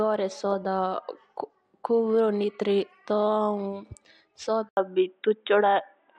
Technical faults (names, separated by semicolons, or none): input switched to a poorer device